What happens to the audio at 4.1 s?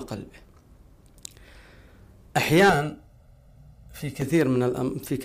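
At 4.1 s the audio is near the end of a channel delay (comb filtering) fault running from 2.70 to 4.22 s. One channel arrives roughly 1.5 ms late and is summed to mono, so shared content cancels at evenly spaced frequencies from around 300 Hz upward, leaving a hollow, phasey sound.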